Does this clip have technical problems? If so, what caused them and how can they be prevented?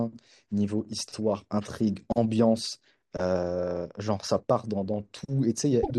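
Yes. From 5.82 to 5.91 s, damaged data in a compressed stream makes the decoder misread frames and lose sync. The result is a brief blip. Verifying checksums during transfer and storage prevents this corruption.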